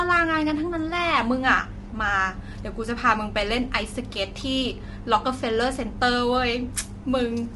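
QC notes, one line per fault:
Throughout, low-delay AAC compression: the speech is rough and grainy with noise between the harmonics, likely from AAC-ELD's short frames at about 32 kbps. On a spectrogram the harmonics are smeared and nothing appears above 11.6 kHz.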